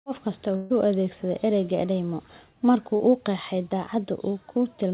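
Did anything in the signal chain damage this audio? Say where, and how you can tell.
Yes, the damage happened at the network stage. A burst of packet loss from 0.56 to 0.72 s removed about 140 ms. The receiver filled the hole by extending and fading the last sound. On a spectrogram this shows as frozen, dimming bands, followed by a jump where audio resumes.

A short concealed packet loss from 2.96 to 3.01 s dropped about 40 ms, also a network fault. Concealment bridged it with a brief smear, visible as a blurred sliver in the spectrogram. That sliver sits under the call codec's ceiling at 4 kHz, with a soft seam in the waveform.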